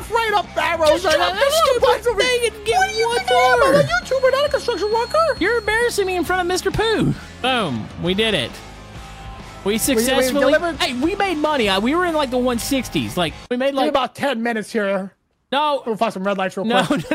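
Feedback whistle from 3.43 to 6.33 s: a thin 4.3 kHz tone roughly 20 dB below the sound, slowly swelling and fading, likely a speaker-to-microphone loop ringing just short of howling.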